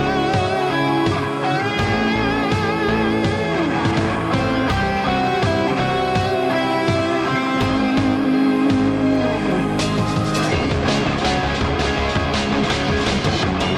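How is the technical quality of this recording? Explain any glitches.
No glitches can be heard anywhere in the recording. There is nothing here that calls for a technical explanation.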